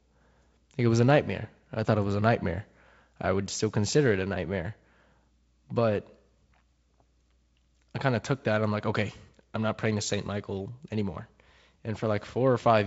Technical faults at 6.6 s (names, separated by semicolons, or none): none